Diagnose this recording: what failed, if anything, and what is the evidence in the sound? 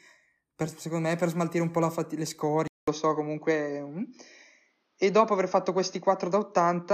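Driver stage: after a 200 ms gap at 2.68 s, speech goes dull with nothing above 6.6 kHz and faint new background noise. Likely input switched to a poorer device.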